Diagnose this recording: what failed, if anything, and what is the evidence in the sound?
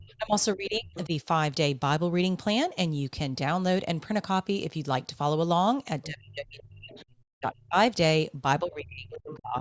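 The speech dips sharply or breaks into pieces at 0–1.12 s, 6.06–6.95 s, 7.39–7.76 s and 8.62–9.57 s, falling by as much as about 30 to 40 dB. This is speech suppressed in double talk at the call-processing stage: the echo canceller likely mistook overlapping talk for echo and attenuated the talker.

Faint scraps of a second voice surface at 0.04–0.14 s, 0.95–1.06 s, 6.91–7.05 s and 9.13–9.39 s, about 15 to 30 dB below the talker. This is the other side's voice leaking through, where the echo canceller likely left residual loudspeaker pickup in the microphone signal.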